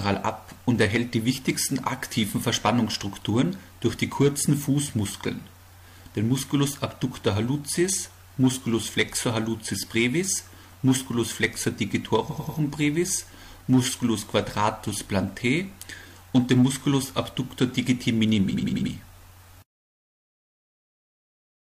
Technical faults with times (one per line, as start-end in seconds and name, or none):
12.26-12.55 repeated frames
18.49-18.86 repeated frames